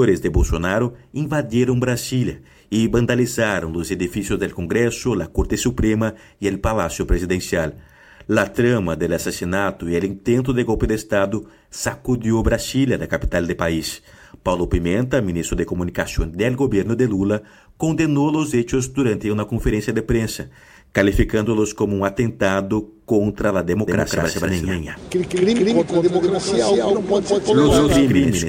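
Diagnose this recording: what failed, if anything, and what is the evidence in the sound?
A doubled audio track starts abruptly at 23.88 s and runs to the end. A dry, full-band copy at roughly the original level trails by about 200 ms, with no decay or room colour. The likely cause is a second, slower capture path mixed in.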